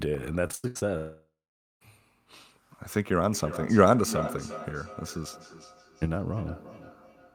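From 0.47 to 0.83 s, audio packets kept going missing, causing repeated packet loss with a robotic sound. Five short holes, the longest 87 ms, were patched by stretching the preceding sound. About 61 percent of the span is concealed, so it sounds choppy and mechanical.

Between 0.97 and 1.82 s, a long network dropout likely cut off the incoming stream. The last sound is carried on as a fading buzz, then about 490 ms of silence follows before audio resumes with that stretch simply gone.

From 3.33 s to the end, two devices on the same call are picking up each other's playback, creating feedback echo between two devices. The speech returns about every 0.4 s, thinner and more ringing, peaking at about 12 dB below the direct speech.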